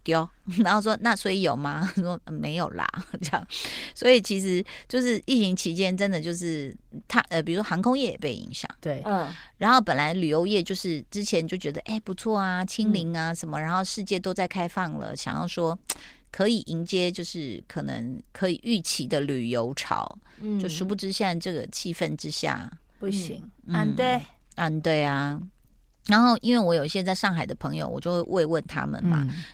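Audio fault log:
No faults are logged for this speech clip. The Opus voice compression runs in its hybrid mode, keeping the full audio band with only light coding damage.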